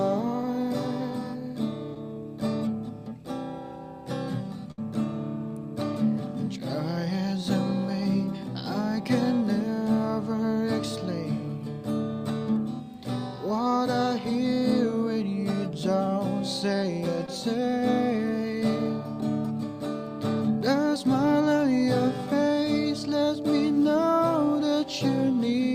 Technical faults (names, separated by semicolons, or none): short concealed packet loss; burst of packet loss